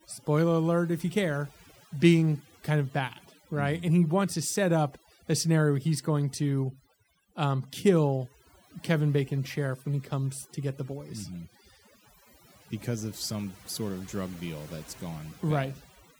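Overdone noise removal runs throughout this speech. Frequency bands near the noise estimate are cut hard, leaving silent, twinkling gaps and taking quiet parts of the voice with them.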